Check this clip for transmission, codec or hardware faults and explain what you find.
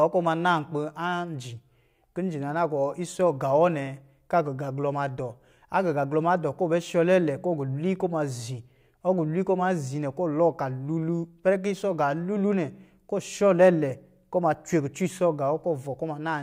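Nothing stood out on listening to this speech recording.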